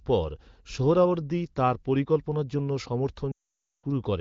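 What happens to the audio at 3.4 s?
At 3.4 s the audio is inside a run of lost AMR speech frames, from 3.32 to 3.85 s. The decoder repeats its last good pitch and vocal tract settings at falling gain, so the sound drops to near silence within two frames. On a spectrogram this shows as a smeared band that fades out, and the waveform flattens.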